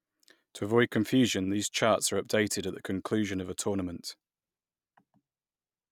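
Nothing in this speech recording stood out as a technical problem on listening.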